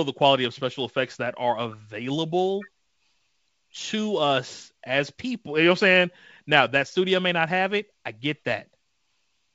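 Speech over G.722 wideband telephone coding at 64 kbit/s, with nothing technically wrong to report.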